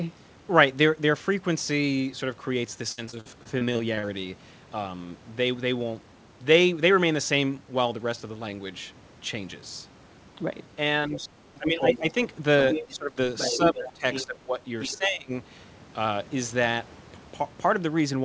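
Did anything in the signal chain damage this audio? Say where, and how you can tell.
Yes, the network side of the call took a hit first. From 2.92 to 4.05 s there are around a dozen short holes, the longest about 55 ms, and about a quarter of that stretch is patched by stretching the last bit of sound. That's repeated packet loss, hence the choppy, robotic texture.

Then there's speech suppressed in double talk, in the call processing. The talker dips at 11.08–12.13, 12.87–13.17, 13.57–14.56 and 14.94–15.32 s, dropping roughly 10 to 20 dB at worst. That's likely the echo canceller ducking everything while both ends talk at once.

The other side's voice is leaking through in the same stretch, at 11.55–11.99, 12.71–12.86, 13.38–14.26 and 14.80–14.97 s. It's around the talker's level early on and much quieter by the end. That's likely loudspeaker echo the canceller didn't fully remove from the mic.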